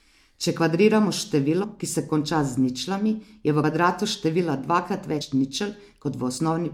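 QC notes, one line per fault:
1.63 s (before "ki se konča z"), 3.62 s (between "z ničlami je v" and "kvadratu števila dvakrat"), 5.20 s (after "v kvadratu števila dvakrat"), 6.36–6.38 s: compressed frames skipped. Whole 23.2 ms frames are missing: about 100 ms of audio at each of the first two points, about 70 ms at the third and about 50 ms at the last. The sound jumps forward at each point.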